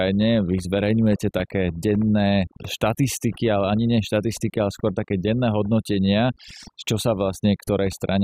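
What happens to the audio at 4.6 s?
At 4.6 s, as throughout the clip, overdone noise removal is at work: bands near the estimated noise floor are pushed down or gated out, taking quiet speech detail with them. Gaps sound near-silent with twinkling specks; a spectrogram shows scattered isolated dots and ragged, hollowed harmonics.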